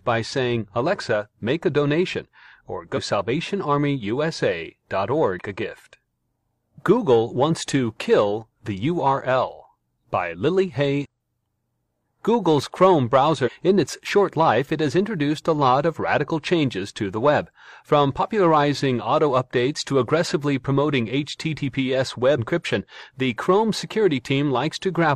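At 2.93–2.99 s, 5.39–5.43 s, 11.01–11.06 s, 13.42–13.49 s and 22.34–22.39 s the speech is broken by short bursts of damaged data in a compressed stream, each lasting roughly 40 to 70 ms. In each case corrupted bytes reach the decoder, which misinterprets the affected frames and loses sync until it finds a valid frame header again. The result is a brief chirp, squawk, click or short hole in place of the intended signal.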